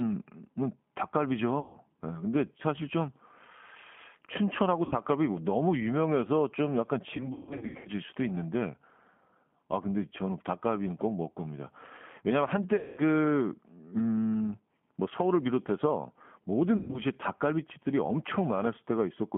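Throughout, the speech has passed through the G.729 codec, an 8 kbit/s coder that rebuilds each 10 ms frame from a vocal tract filter, a pitch predictor and a few pulses. Nothing reaches past about 3.4 kHz, and the voice sounds plainly rough and synthetic.

VoIP packet loss is concealed by the speech codec at 1.60 to 1.77 s (140 ms lost), 4.85 to 4.94 s (60 ms), 7.17 to 7.91 s (400 ms scattered, runs up to 140 ms), 12.76 to 13.02 s (220 ms) and 16.77 to 17.01 s (runs up to 120 ms). In each gap the decoder stretches the last pitch and filter into a fading buzzy tone or coloured noise, and the voice stays weak or distorted afterwards.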